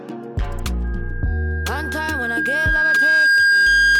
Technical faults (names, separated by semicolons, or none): loudspeaker feedback squeal